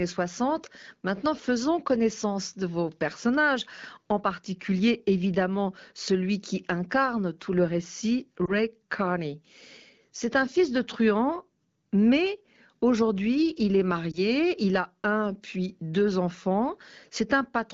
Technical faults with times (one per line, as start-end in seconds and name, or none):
8.45-8.52 lost AMR speech frames
14.12-14.21 lost AMR speech frames